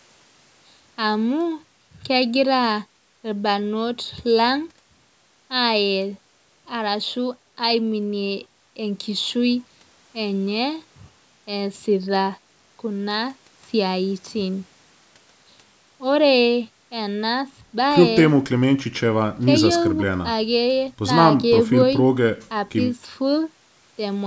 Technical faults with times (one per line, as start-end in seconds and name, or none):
none